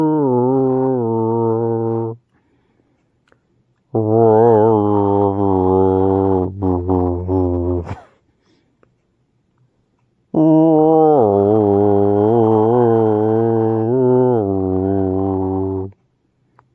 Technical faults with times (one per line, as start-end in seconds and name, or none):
none